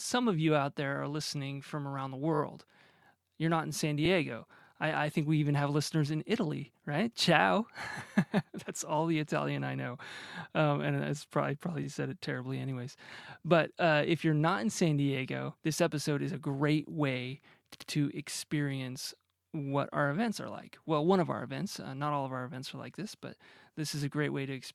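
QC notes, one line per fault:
2.33–2.40 s, 4.05–4.08 s, 11.83–11.87 s, 17.73–17.90 s: repeated frames. Short stretches of speech are replayed, a 20 ms frame three times at 2.33 s and 80 ms twice at 17.73 s, causing stutters and adding about 0.28 s in total.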